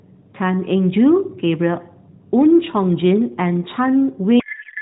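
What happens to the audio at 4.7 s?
At 4.7 s the speech is inside a codec payload misread running from 4.40 s to the end at 4.82 s. Octet-aligned AMR frames are being parsed as bandwidth-efficient, so every field sits in the wrong bit position, and the 12.2 kbps AMR-NB speech collapses into garbled noise and warble that barely tracks it.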